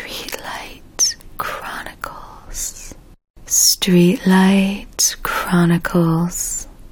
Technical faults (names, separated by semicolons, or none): none